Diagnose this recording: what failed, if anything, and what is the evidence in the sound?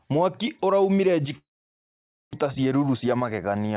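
Network stage, long network dropout, likely a lost packet burst: from 1.38 to 2.35 s the sound collapses into an empty, dark gap on the spectrogram, resuming with part of the audio missing.

Jitter buffer speed-up: from 2.59 to 3.57 s the sound runs about 7% faster at unchanged pitch, as roughly 70 ms of pitch-period slices are cut, leaving tiny splices in the waveform.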